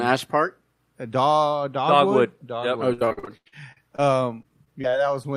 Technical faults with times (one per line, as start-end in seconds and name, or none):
2.93-4.00 repeated packet loss (robotic sound)
4.42-5.26 repeated packet loss (robotic sound)